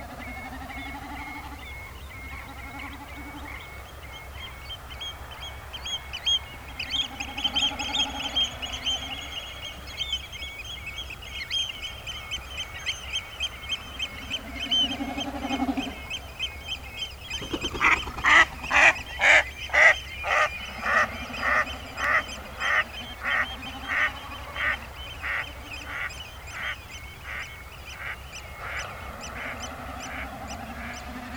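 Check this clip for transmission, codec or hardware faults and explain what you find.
One fault is present: clock drift buffer slips, running from 1.47 s to 29.76 s. The likely cause is two devices each running on its own clock, mismatched by roughly 70 parts per million, so the buffer between them creeps until it must drop or repeat a small block of samples, a handful each time. Each correction is heard as a short, regular click, recurring about every 2.57 s, around ten times across that span.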